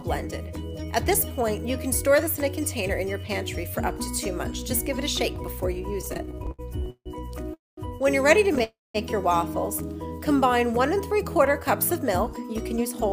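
From 6.01 to 7.08 s you get repeated stalls, a proper stutter. Packets kept turning up late or slower than playback, so the jitter buffer ran dry 14 times in that stretch. Each time the receiver stretched out the last bit of sound to cover the hole, 364 ms of filler in total, with the longest gap at 154 ms. That's about a third of that second or so being patched, but nothing is actually lost. It just lurches and drags.

Right after that come two call audio freezes, at 7.54 to 7.79 s and 8.63 to 8.96 s. The receiver holds the last sound as a brief buzzy tail that dies away, then there's flat silence, roughly 190 ms in the first and 200 ms in the second. The total hold is 236 ms and 310 ms. The likely cause is packets getting held up in transit so the buffer emptied outright. When they arrive, the audio picks up exactly where it stopped. Nothing is skipped, but each freeze pushes everything after it later by the length of the hold.

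From 10.07 to 10.51 s there's a jitter buffer slow-down. The buffer was refilling its reserve by repeating single pitch periods and slivers of pauses over and over. That adds 43 ms, so playback runs at about 92% speed. The pitch stays put, but things sound a touch drawn out, maybe with a faint warble.

Finally, 12.27 to 13.00 s is a jitter buffer speed-up. The buffer was holding more audio than it wanted, so it trimmed short pitch-period-sized chunks, about 70 ms altogether. Playback runs at about 107% speed at the same pitch and sounds a bit hurried.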